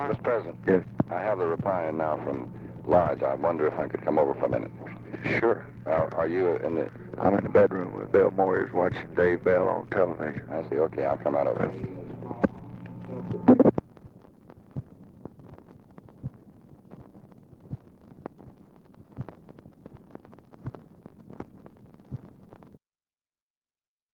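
No technical faults can be heard anywhere here.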